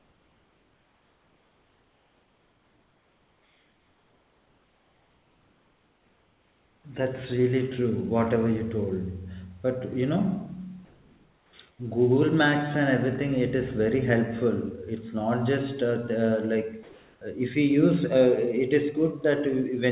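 From 0 to 6.84 s, then at 10.85–11.53 s, 11.71–11.79 s and 16.83–17.21 s, comfort noise replaces the background: the room's textured noise gives way to a smooth, featureless hiss, about 3 dB quieter in the first stretch, about 2 dB quieter in the next two, and about 1 dB louder in the last. Unlike a gate or dropout, the pauses never fall silent. The likely cause is discontinuous transmission, with the receiver synthesising noise while the sender paused.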